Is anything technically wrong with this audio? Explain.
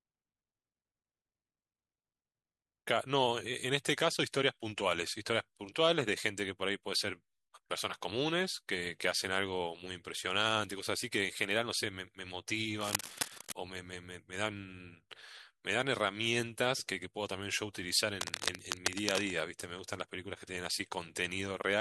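Yes. Cable scratch noise occurs from 12.81 to 13.53 s and again from 18.21 to 19.33 s. A worn cable or connector being moved is the likely cause: its contact resistance flickers, injecting dense, irregular noise bursts only a few decibels below the speech, heard as harsh scratching over it.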